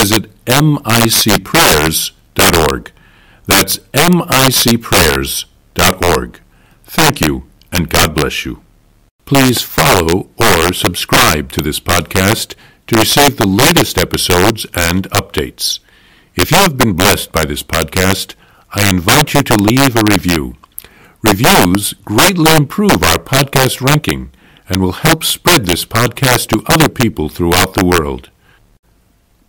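All the way through, the speech has integer overflow: driven about 14 dB too hot, a couple percent of samples wrap to the opposite sign, so loud peaks snap into harsh cracks.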